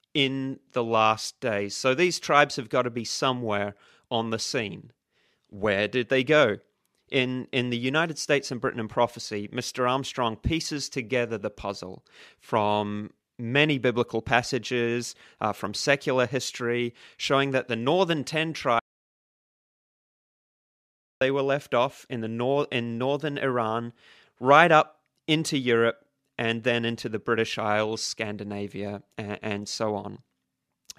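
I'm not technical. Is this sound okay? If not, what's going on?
No. There's an audio dropout to silence from 18.79 to 21.21 s: the speech goes completely dead for about 2.4 seconds, then resumes at "were left off in". Likely the input briefly disconnected or got muted.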